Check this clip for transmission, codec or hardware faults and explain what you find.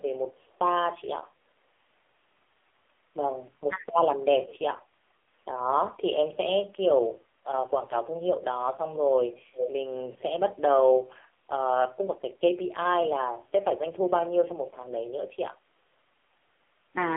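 Three faults are audible: heavy mobile-codec damage throughout, one brief double-talk dip, and two echo leaks.

AMR narrowband mobile codec, throughout: the speech is squeezed into a 300 Hz to 3.5 kHz line band and rebuilt from a coarse vocal-tract model. The pronounced buzzy, synthetic texture points to a low AMR-NB mode, around 5.9 kbps, where few pulses per subframe remain.

Speech suppressed in double talk, 3.68 to 3.77 s: the speech dips by roughly 15 dB for about a tenth of a second. The likely cause is an echo canceller that mistook overlapping far-end speech for echo and attenuated the talker along with it.

Echo leak, 4.48 to 4.59 s and 9.53 to 9.73 s: a delayed copy of the speech returns 417 ms later. It is faint at the first point, about 25 dB down, and nearly as loud as the speech at the second. This is likely a loudspeaker echo passing an incompletely converged canceller.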